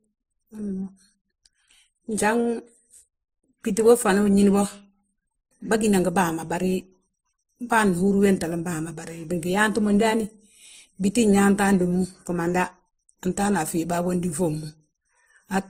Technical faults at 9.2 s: transcoding between lossy codecs

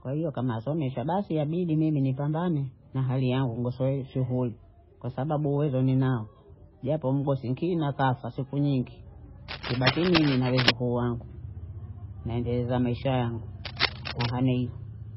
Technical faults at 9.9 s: MP3 compression; cable scratch noise

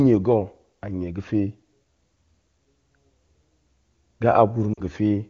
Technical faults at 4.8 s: lost AMR speech frames

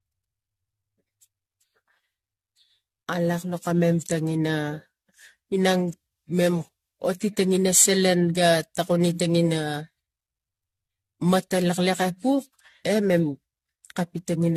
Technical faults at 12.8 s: generation loss

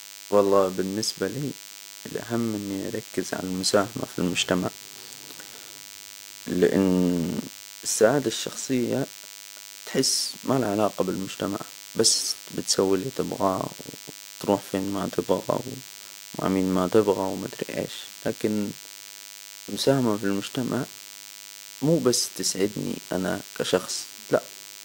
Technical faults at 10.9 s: DECT cordless phone buzz

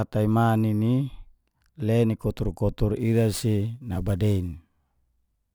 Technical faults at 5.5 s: sample clock jitter

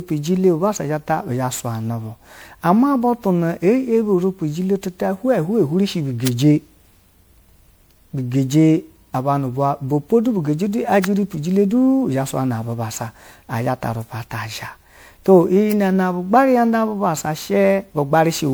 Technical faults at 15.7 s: generation loss; electrical switching spike

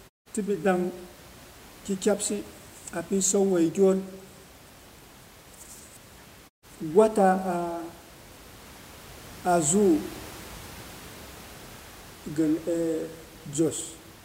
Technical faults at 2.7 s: none

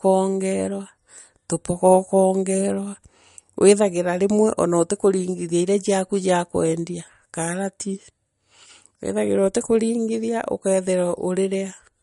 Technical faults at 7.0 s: MP3 compression

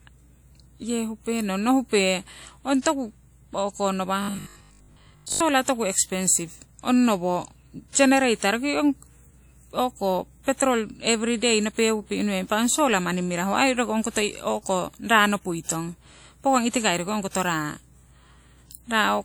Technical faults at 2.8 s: mains hum; WMA compression; pre-echo

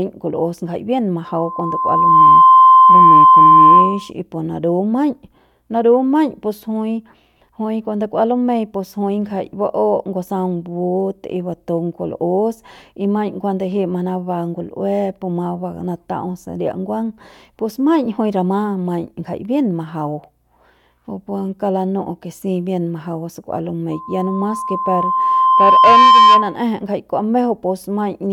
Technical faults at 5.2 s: none

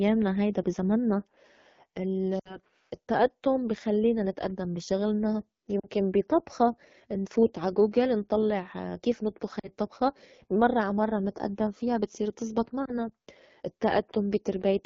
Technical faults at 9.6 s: AMR wideband (HD Voice) codec; lost AMR speech frames

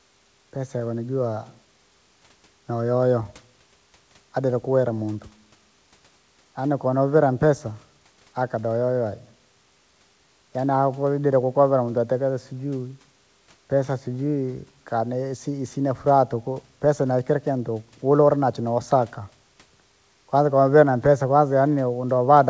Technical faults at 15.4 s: none

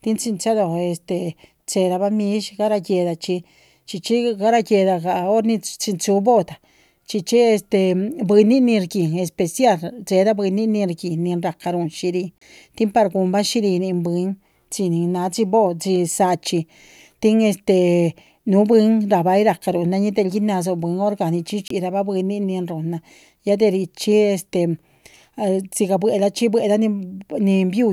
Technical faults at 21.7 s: Bluetooth stall

